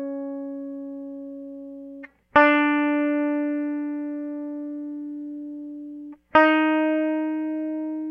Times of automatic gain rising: none

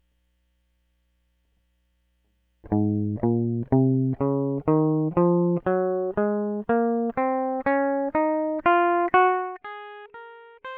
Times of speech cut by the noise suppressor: none

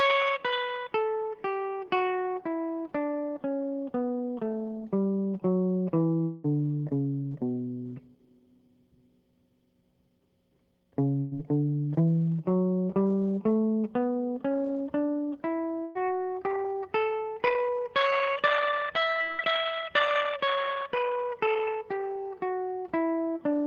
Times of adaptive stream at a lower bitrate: none

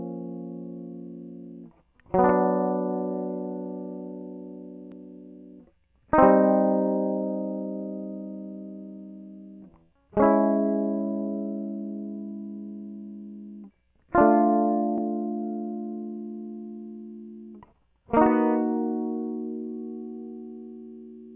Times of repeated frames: none

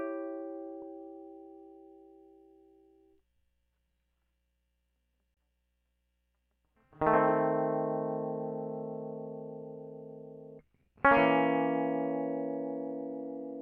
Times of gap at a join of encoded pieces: 5.34-5.37

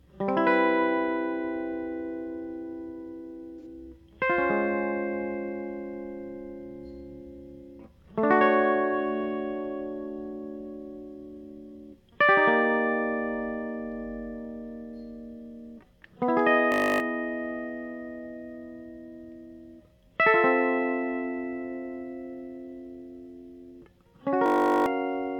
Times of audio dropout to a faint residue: none

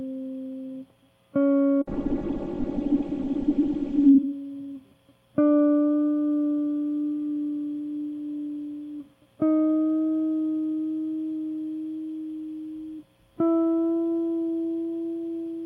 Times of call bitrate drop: 1.84-4.21

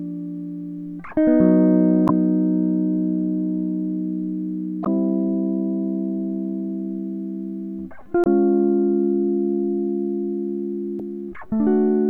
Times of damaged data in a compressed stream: 2.05-2.10, 4.82-4.87, 8.21-8.27, 10.97-11.01

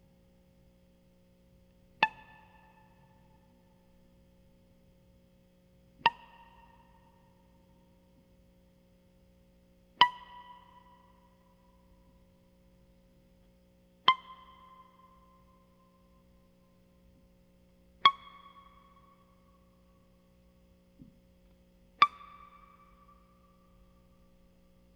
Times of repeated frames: none

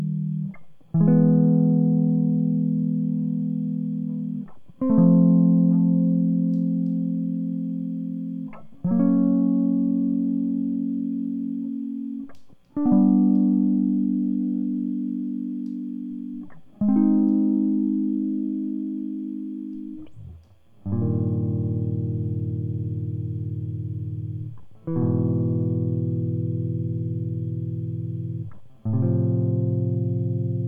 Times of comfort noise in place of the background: none

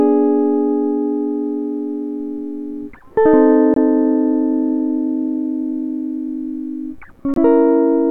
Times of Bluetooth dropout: 3.74-3.77, 7.34-7.38

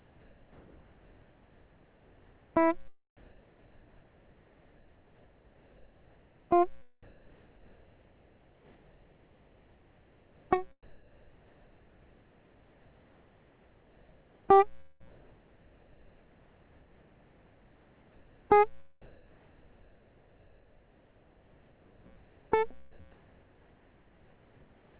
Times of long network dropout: 14.80-15.02

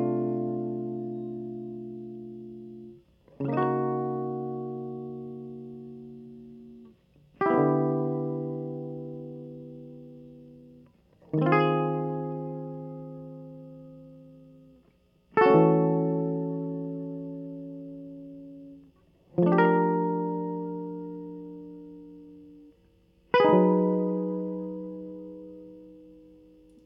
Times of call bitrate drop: none

